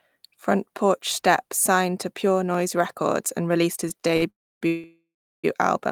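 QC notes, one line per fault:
2.54 s and 4.84 s, dropped buffer (overrun): the samples were likely not collected before the hardware overwrote them, so a few milliseconds of audio vanish and the two sides are butted together. Each point gives a small jump forward in the sound, with no silence.
3.89 to 4.24 s, repeated stalls (stutter): packets arrived late four times, emptying the jitter buffer, and the receiver stretched the last sound to fill about 109 ms in all, longest gap 49 ms. About 31 percent of the span is filled-in sound, so the speech drags and stutters, with nothing lost.
4.30 to 4.63 s and 4.67 to 5.46 s, call audio freeze: packets were held up and the jitter buffer ran dry, likely from network delay. The last sound carries on and fades, then about 290 ms and 380 ms of silence follow before the speech resumes where it stopped.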